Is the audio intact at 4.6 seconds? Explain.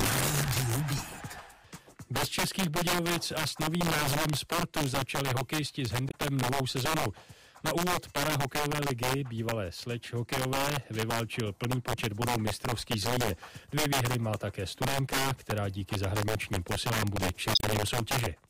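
No. Integer overflow runs through the whole clip, including 4.6 s: with gain pushed about 6 dB too hot, peaks exceeding the integer limit wrap to the opposite sign instead of being capped, so the few percent of loudest samples flip full-scale, producing violent cracks sharper than clipping.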